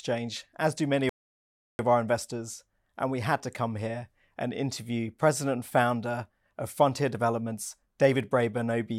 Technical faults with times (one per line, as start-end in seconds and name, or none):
1.09-1.79 rebuffering stall